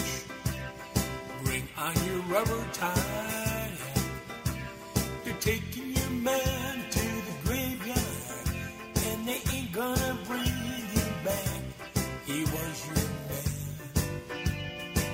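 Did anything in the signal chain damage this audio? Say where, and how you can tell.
No, nothing in the signal chain damaged this audio.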